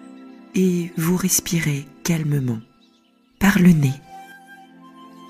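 At 3.44 s there's a sudden gain jump. Everything, background included, steps up about 6 dB until 4.32 s, likely an unramped gain change.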